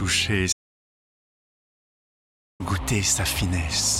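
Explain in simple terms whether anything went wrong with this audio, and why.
Something did go wrong: an audio dropout to silence. At 0.53 s the sound cuts off abruptly and returns at 2.60 s, so about 2.07 s is missing. The likely cause is the input briefly failing, such as a loose connection or an accidental mute, while recording carried on. What separates this from a natural pause is that the gap is completely dead, with no faint background hum or room sound at all, and the sound stops and restarts mid-flow.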